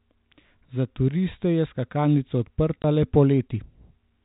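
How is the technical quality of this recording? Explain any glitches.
The speech comes through as narrowband telephone audio, capped at 4 kHz by G.711 telephone coding. One glitch stands out. At 2.82 to 2.84 s there is a short dropout from packet loss filled with silence. The gap lasts 20 ms, which fits a single lost packet. The receiver had nothing to play for that slot, so it inserted silence. The sound stops abruptly and restarts just as abruptly.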